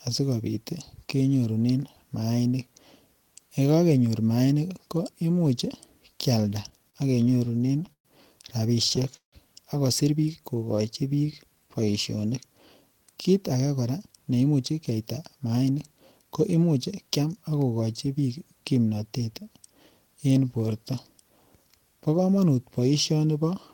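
Speech plays with three related delivery faults, all from the receiver's jitter buffer. From 6.49 to 8.08 s there are repeated stalls (stutter): fifteen short halts, the longest 122 ms, where the receiver stretched the last sound because packets arrived late. About 19% of that stretch is filled-in sound. A second burst from 8.89 to 9.35 s has five halts, the longest 159 ms, and fill makes up 42% of that span. Unlike packet loss, nothing is skipped. The speech drags and catches, then picks up exactly where it stopped. From 10.42 to 12.17 s a jitter buffer slow-down runs the speech at 90% speed. Pitch periods are repeated to rebuild a reserve, adding 192 ms in total. It differs from the stutter because the flow never halts. Sounds are drawn out. It also differs from a slowed recording because the pitch does not drop. From 13.81 to 17.33 s a jitter buffer speed-up does the opposite. It trims short pieces of one or a few pitch periods to shrink excess delay, roughly 0.4 s overall, so the speech runs at 111% and sounds hurried. 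The pitch stays the same, which separates it from a sped-up playback rate.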